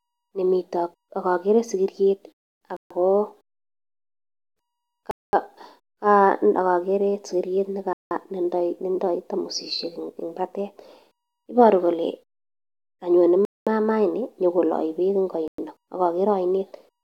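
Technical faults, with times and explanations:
2.77–2.91 s, 5.11–5.33 s, 7.93–8.11 s, 13.45–13.67 s (just before "maama ini") and 15.48–15.58 s: Bluetooth stall. Interference likely delayed wireless packets and drained the receiver's buffer, so the speech cuts to silence for 0.11–0.22 s, then resumes.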